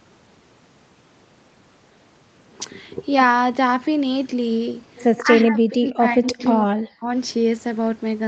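From 5.17 to 5.21 s, a faint echo leak appears, about 20 dB below the speech and trailing it by 114 ms. The likely cause is a far-end loudspeaker echo that the canceller did not fully remove. Between 5.19 and 6.4 s, the speech dips in pieces, by up to about 25 dB. This is likely speech suppressed in double talk, as the canceller turns down the talker along with the echo. The echo returns at 5.88 to 5.92 s, much weaker at about 30 dB down. It comes back from 6.29 to 6.49 s at about 20 dB down. From 6.65 to 7.09 s, suppression cuts the speech nearly out, by about 40 dB.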